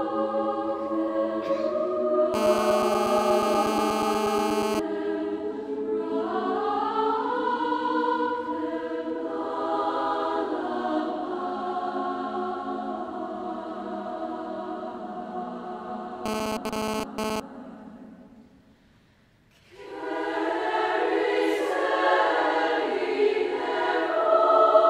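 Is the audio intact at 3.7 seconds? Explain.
No. A GSM phone buzz runs from 2.34 to 4.80 s and covers the 3.7 s point. A 2G phone nearby, here in a call, transmits in bursts at about 217 per second. The audio circuitry demodulates those radio pulses into the signal path. The result is a hard, raspy buzz at 217 Hz, rich in harmonics and unrelated to the underlying sound. It sits about 2 dB below the signal and holds nearly steady across the span.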